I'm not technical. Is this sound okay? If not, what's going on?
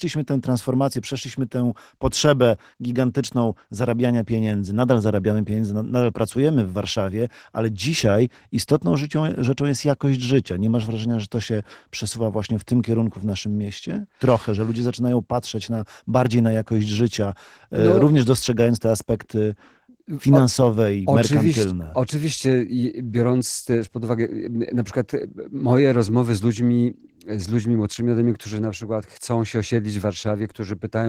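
No. For the whole clip the speech carries Opus voice compression damage, squeezed hard to save space. Voices come out hoarse and a little robotic, because the part that models the voice codes its raw buzz coarsely. Unlike simple muffling, where the top end just disappears, the highest frequencies are still present here, since a second coding layer rebuilds them rather than cutting them off.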